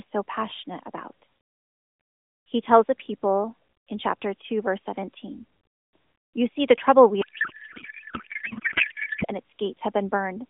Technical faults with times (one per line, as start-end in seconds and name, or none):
7.22-9.25 codec payload misread